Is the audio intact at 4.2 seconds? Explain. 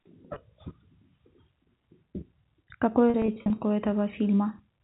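Yes, at 4.2 seconds the speech is intact, with no fault there beyond the narrow band of the telephone coding it passes through.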